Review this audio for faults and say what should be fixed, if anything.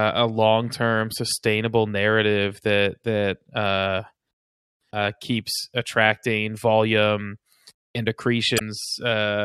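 Damaged data in a compressed stream, 8.56 to 8.61 s, right after "keeps attracting volume and": a brief glitch lasting about 50 ms breaks into the speech. Some bytes in the compressed stream were lost or corrupted, so the decoder misread the affected frames, lost sync and had to hunt for the next valid frame header before clean audio resumed. To fix it, re-fetch or re-encode that stretch from an intact source. To prevent it, verify file integrity with checksums after transfer and use error-checked delivery so corrupted frames are caught before decoding.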